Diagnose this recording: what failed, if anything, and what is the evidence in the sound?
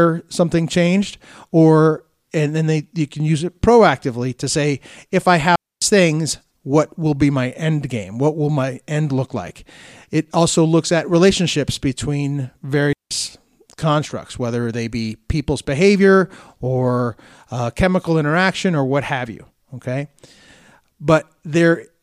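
Digital wireless dropout at 5.56 s and 12.93 s. The radio link lost data, so the receiver muted, leaving clean silent gaps of 260 ms and 180 ms with no noise bursts.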